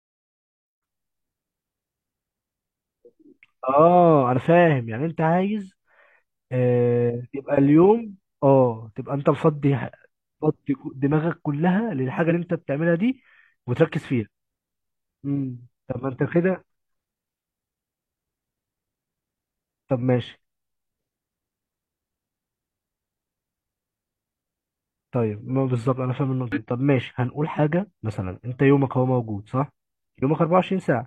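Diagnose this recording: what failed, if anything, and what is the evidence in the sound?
The failure is at the codec or storage stage: damaged data in a compressed stream. Short glitches, heard as chirps, squawks, clicks or short holes, break into the speech at 4.32–4.36 s, 7.25–7.28 s, 12.26–12.32 s, 23.08 s and 26.52–26.58 s, each lasting 64 ms or less. Corrupted bytes make the decoder misread frames and lose sync until it finds a valid header. On a spectrogram each event shows as a brief broadband or smeared block; the waveform shows an abrupt, discontinuous burst.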